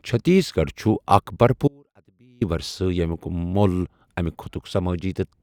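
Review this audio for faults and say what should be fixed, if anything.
At 1.68 s the speech cuts out abruptly and returns at 2.41 s, a gap of about 0.73 s. This is an audio dropout to a faint residue. The gap is not silent. A faint leak of the sound remains, roughly 35 dB below its normal level. The break is sudden, not a pause or a fade. The likely cause is a brief loss of the signal upstream while the path after it stayed live. Secure the source connection and monitor the feed so that interruptions are caught during capture.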